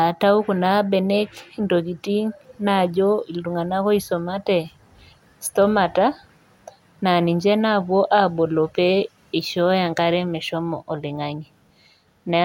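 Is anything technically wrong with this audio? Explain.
No, nothing technically wrong turns up anywhere in this speech recording, so there's nothing here to flag.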